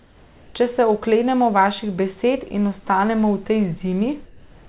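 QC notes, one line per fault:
4.26–4.68 s, comfort noise in place of the background: the final 0.43 s of pause loses its natural room texture. A steady, featureless hiss replaces it, shifting level by about 2 dB. The sender likely stopped transmitting during silence, and the receiver synthesised filler noise.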